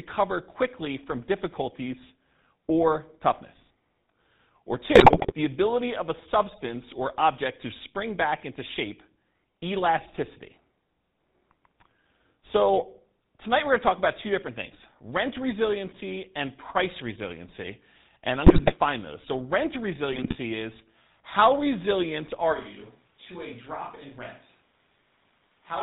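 Speech, carried over the GSM full-rate codec for its whole length, with plainly audible codec damage. The voice has the gravelly, buzzy grain of a vocal-tract model driven by a sparse, regular pulse train, and the sound fits a 13 kbit/s link. On a spectrogram, energy stops sharply at 4 kHz, and the harmonics look smeared and combed rather than clean. GSM bit errors break the sound into squawks and gargling at 4.94–5.34 s, 18.46–18.73 s and 20.13–20.35 s. Corrupted filter, pitch and gain values reach the decoder, so individual frames come out with a wrongly shaped spectrum or a sudden jump in level. In the waveform these show as abrupt spikes and ragged bursts. On a spectrogram they appear as blocky 20 ms-wide patches of misplaced energy. From 22.55 s to the end the voice suddenly turns roomy and hollow, with thinner bass, a level about 10 dB lower and a noise floor only roughly 30 dB below the speech. 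This is likely a switch to a distant microphone after the close one dropped out. The waveform steps down in amplitude at that instant. The spectrogram shows weaker low frequencies, reverberant tails blurring each syllable, and a raised, steady background wash between phrases.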